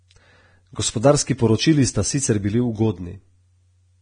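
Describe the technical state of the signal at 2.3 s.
Vorbis compression affects 2.3 s, as it does the whole of this speech clip, and is likely the cause of what is heard there. The encoder describes the spectrum as a smooth floor with a coarsely quantised residue, so treble detail is replaced by noise of similar energy and nothing survives above about 9.7 kHz. At this moment the speech sounds hissy and grainy, with roughened tone and smeared consonant onsets, damage heavy enough to suggest a bitrate in the low twenties of kbps.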